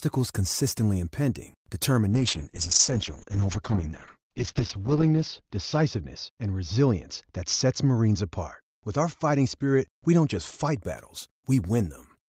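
Right after "consistently impending", at 2.1 s, there's a call bitrate drop that lasts until about 10.87 s. The connection's bandwidth estimate fell, so the encoder got far fewer bits to work with. That sounds like a step from around 32 kbps down to about 8 kbps. The top end gets cut from 20 kHz to 8 kHz, and the speech turns muffled and a bit watery, bottoming out for roughly 2.9 s before the quality climbs back.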